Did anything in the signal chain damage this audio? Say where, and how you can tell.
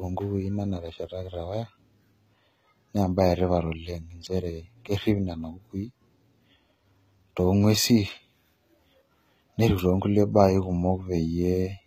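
Yes: HE-AAC compression, throughout, at the codec stage. Sibilants turn gritty and metallic, and nothing sounds above 14.9 kHz. The treble is likely rebuilt from copied lower bands whose harmonics misalign, which fits a bitrate around 20 kbps.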